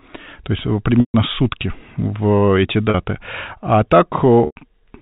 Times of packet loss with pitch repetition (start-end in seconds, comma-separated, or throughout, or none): 1.00-1.14, 2.90-2.94, 4.46-4.56